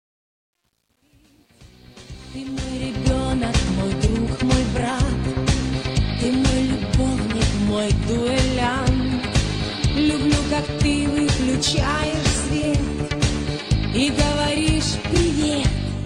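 A fade-in stage keeps too few bits without dither, consistent with roughly 10-bit resolution. The result is truncation distortion from 0.0 to 3.07 s, grittiest up to 2.13 s.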